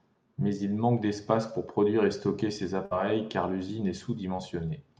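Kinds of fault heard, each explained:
Burst of packet loss: at 2.85 to 2.93 s, just after "produire et stocker ces", a run of lost or late packets leaves a hole the receiver covers by extending the last sound for about 54 ms while fading it, heard as a held, dimming smear. About 60 ms of real audio never arrives, so playback picks up again at "car l'usine est" with that stretch skipped rather than delayed.
Short concealed packet loss: at 4.37 to 4.40 s, right after "car l'usine est", a brief slice of audio failed to reach the decoder in time. The receiver bridged it by continuing the preceding sound for about 16 ms and blending back into the real signal, while about 20 ms of the original is gone. It comes through as a quick smear or wobble in the flow rather than an audible gap.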